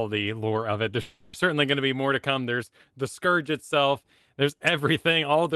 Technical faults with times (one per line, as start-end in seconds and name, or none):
1.01-1.35 call audio freeze